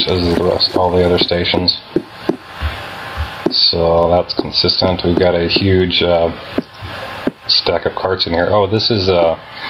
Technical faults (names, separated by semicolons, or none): gain pumping